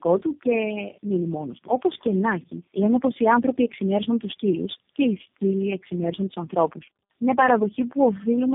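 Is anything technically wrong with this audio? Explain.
Yes. Tandem speech coding runs throughout. The speech seems to have been re-encoded by about four speech codecs in a row, each compounding the last one's damage, leaving it rough, muffled and warbly. On a spectrogram, nothing appears above 3.7 kHz and the harmonics look smeared.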